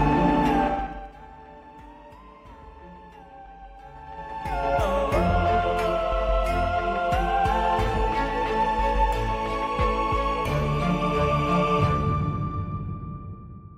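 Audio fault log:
0.65–1.12 s and 3.90–4.74 s, zipper noise: gain fell, then rose, about 20 dB in unsmoothed 3 dB steps, roughly 10 to 15 per second, each step clicking into a rapid tick.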